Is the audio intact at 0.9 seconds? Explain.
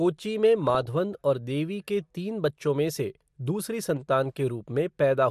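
No, not quite. At 0.9 seconds you're right at the tail of a burst of DAB burbling that runs from about 0.67 to 0.89 s. Bit errors, a small fraction of a percent, slip past error correction into the MP2 data, so single sub-bands get short blips of noise or jump in level for up to a frame, giving that burbling sound.

Underneath that, the whole clip carries MP2 compression damage. The dull, gurgly, grainy quality is likely from a Layer II encoder starved of bits, consistent with roughly 80 kbps, switching upper sub-bands off and coarsely quantising what's left. It's clearly audible throughout the speech.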